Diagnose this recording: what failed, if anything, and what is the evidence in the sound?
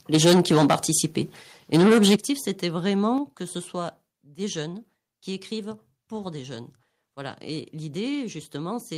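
Microphone overload at the input converter, likely from input gain set too high. From 0.14 to 1.0 s peaks run about 11 dB past full scale, roughly a tenth of samples flattened. From 1.73 to 2.16 s they run about 9 dB over, about a third clipped. The loudest syllables crackle harshly.

Microphone volume stepped down in call processing, likely automatic gain control reacting to the clipping. Level drops abruptly by about 4 dB at 0.15 s, 11 dB at 2.16 s and 5 dB at 3.18 s. Speech and background fall together, the biggest step right as the second distorted burst ends.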